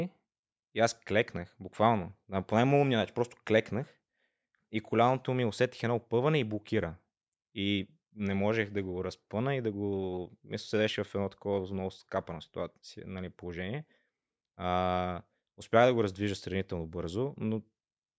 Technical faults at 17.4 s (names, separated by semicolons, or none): none